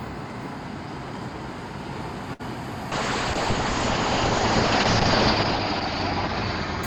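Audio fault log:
2.33–2.41 s: short stall from a late packet. A packet arrived late and the jitter buffer ran dry, so the receiver held the last sound for about 60 ms. It then resumed from the same point, so nothing is lost, but everything after it runs about 60 ms later. The stretched moment sounds briefly frozen, with a faint buzz or dip. A spectrogram shows a short block of repeated, smeared frames. The waveform shows a small repeating or slightly dipping stretch.
2.92–6.87 s: call bitrate drop. The call's bandwidth estimate collapsed, and the encoder was pushed onto far fewer bits. That fits a fall from about 64 kbps to roughly 6 kbps, held at its lowest for about 2.2 s. The coarser coding makes the sound rough or watery, and the audio band shrinks from 20 kHz to 8 kHz, which muffles it. On a spectrogram everything above 8 kHz goes blank, and what remains looks blotchy and quantised.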